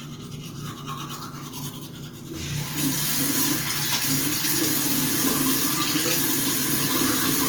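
From start to finish the sound has a rough, grainy texture. Tonal parts turn noisy rather than swirling, and the damage is plainly audible throughout, although the high end stays open up to about 20.1 kHz. This is likely Opus compression in its CELT music mode: with too few bits, the encoder rebuilds starved bands from folded lower content or noise, which fits a rate around 24 kbps.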